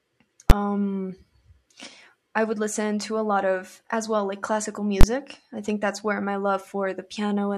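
At 0.5 s, and again at 5.01–5.03 s after "as well like classical", invalid numbers at full scale pin the output to maximum, each block landing as one loud bang.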